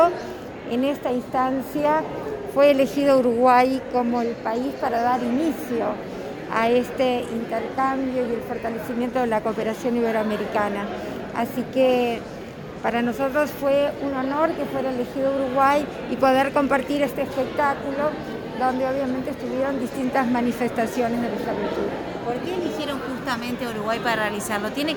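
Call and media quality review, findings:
Likely electrical interference or a struggling interface injecting regular pulses: train of clicks, 21.23–22.67 s, 14 per second, some twenty in all, ticking around 5 dB above the sound.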